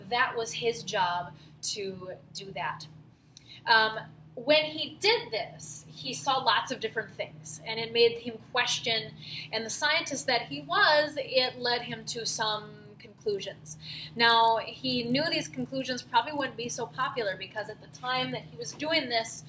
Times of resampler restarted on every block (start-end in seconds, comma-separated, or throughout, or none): 11.42-19.48